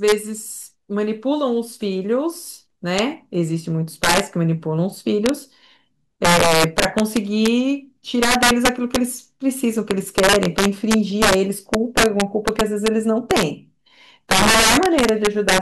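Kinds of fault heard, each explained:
Integer overflow: the speech is pushed about 10 dB past full scale, and instead of limiting, the loudest peaks wrap to the opposite sign. Only around 2 percent of samples go over, but each one snaps into a harsh crack throughout the clip, much sharper than ordinary clipping.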